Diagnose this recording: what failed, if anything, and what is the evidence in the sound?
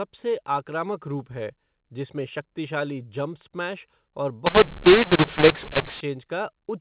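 The failure is at the codec stage: the G.711 stream was coded as A-law but decoded as mu-law, a mu-law and A-law mix-up. It starts at 4.46 s, right after "स्मैश और", and lasts until 6.01 s. Through that span the speech turns harsh and gritty. Loud and soft parts land at the wrong levels. The gaps between syllables hiss instead of falling quiet. The decoder maps each 8-bit code through the wrong logarithmic curve, so the quietest codes come out well above silence. Before 4.46 s the A-law telephone coding is heard as expected, with nothing above 4 kHz.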